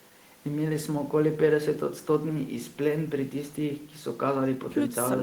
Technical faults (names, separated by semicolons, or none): none